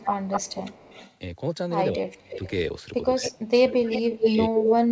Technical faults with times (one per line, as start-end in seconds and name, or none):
0.00-0.07 speech suppressed in double talk
0.00-1.15 echo leak
1.93-2.44 speech suppressed in double talk
2.12-2.49 echo leak
3.14-3.25 speech suppressed in double talk
3.27-3.48 echo leak
3.65-4.92 speech suppressed in double talk
3.92-4.74 echo leak